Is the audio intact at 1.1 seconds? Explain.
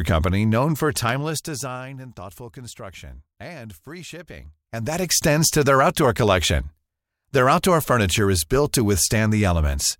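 No. At 1.09 s a single sharp click cuts through the speech, a thin vertical line across the spectrum. It is likely dropped samples: a fraction of a millisecond of the stream goes missing, so the waveform jumps abruptly from one value to a later one.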